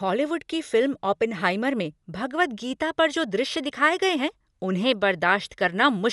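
Speech that sounds dull and bandwidth-limited throughout, with nothing above about 11.5 kHz and a rough, fluttering noise clinging to voiced tones. This is likely Dolby Digital compression at a low rate, which fits about 64 kbps, where starved frequency lines are filled with dither noise.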